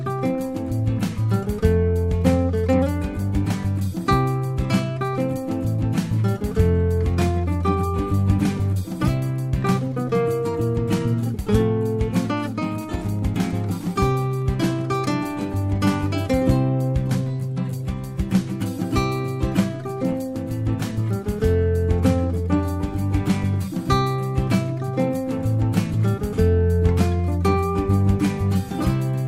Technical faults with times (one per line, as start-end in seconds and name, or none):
12.33-15.59 Wi-Fi interference